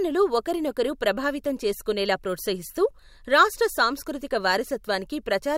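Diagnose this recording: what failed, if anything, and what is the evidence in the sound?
Nothing in the recording points to a failure at any stage of the chain. No event in the speech marks a break in capture, conversion, transmission or playback.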